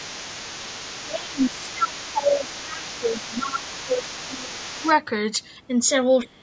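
A loudspeaker echo that the canceller likely failed to fully remove lets the other side's voice leak through from 0.0 to 2.04 s and again from 2.24 to 4.94 s, a faint second voice roughly 20 dB below the talker. With both sides talking, the canceller likely couldn't tell the talker from the echo and turned both down, so the speech suppressed in double talk dips by around 15 dB across about 3 s between 1.04 and 4.58 s, briefly by a few dB at 4.81 s, and by about 25 dB from 6.25 s to the end.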